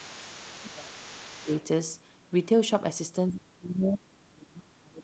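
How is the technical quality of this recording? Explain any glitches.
The recording has two call-processing faults, both clustered at the start, with the first returning for the whole final stretch.

Speech suppressed in double talk occurs from 0.0 to 0.93 s, briefly at 1.41 to 1.5 s, and from 3.3 s to the end. The echo canceller, likely unable to separate the local talker from loudspeaker echo, turns everything down. The speech dips by about 15 to 30 dB.

The other side's voice leaks through from 0.05 to 1.64 s, at about 20 dB below the main speech. The canceller likely left residual loudspeaker sound in the microphone signal, so a faint second voice sits under the talker. The call's band limit caps everything at 8 kHz.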